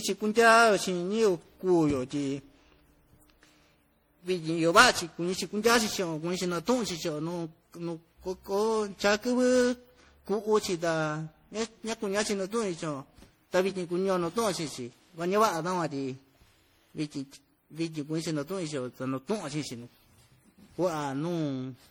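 Throughout the speech there is generation loss: swirly, hollow, smeared sound with blurred consonant attacks, worse than one encode fitting 64 kbit/s MP3 would give, though content reaches 20.6 kHz. Likely around ten repeated lossy passes compounded the quantisation noise.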